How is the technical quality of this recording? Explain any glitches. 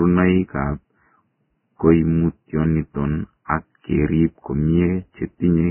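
The technical quality is poor, with heavy codec damage across the whole recording.

Vorbis compression is the likely cause, audible throughout the clip. The speech has nothing above 3 kHz, so the treble is gone and the sound is dull and boxy. What detail survives below that cut-off has been quantised so coarsely that it turns into grainy, hissy noise, roughening the tone and smearing consonant attacks. That degree of damage fits a very low bitrate, around 10 kbps.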